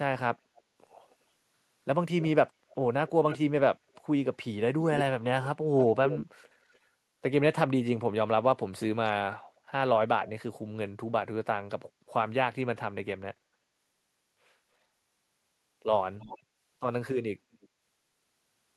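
Echo leak appears at 0.56–1.15 s, 3.08–3.38 s, 3.94–4.02 s, 4.84–6.79 s, 16.19–16.39 s and 17.54–17.68 s, most likely from a loudspeaker endpoint whose echo canceller let its own playback return. Each is a distinct copy of the speech trailing about 0.28 s behind, drifting to about 0.31 s later on. That separated delay distinguishes it from room reverberation, which smears continuously. The copy is faint in most bursts and nearly as loud as the speech through 4.84–6.79 s.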